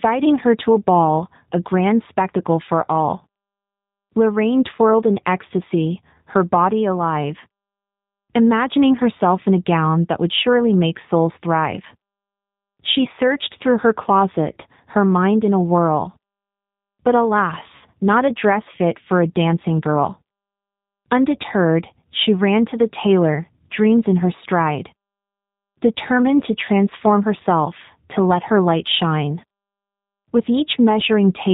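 From start to finish the speech carries the sound of the G.729 codec, and the coding damage is plainly audible. The voice is rebuilt from a vocal tract filter, a pitch predictor and a few pulses per short frame, so it comes out slightly rough and synthetic, with the thin grain typical of an 8 kbit/s VoIP stream. On a spectrogram everything stops cleanly near 4 kHz, and the harmonics look smeared between frames.

From 17.76 s to 17.85 s there is VoIP packet loss concealed by the speech codec, just before "not a dress fit". About 60 ms of audio went missing, which fits two lost packets. The decoder filled the gap by repeating its last pitch and filter state at falling gain, so the sound is stretched into a brief buzzy tone or coloured noise that fades. On the waveform it shows as a short stretch that shrinks in level.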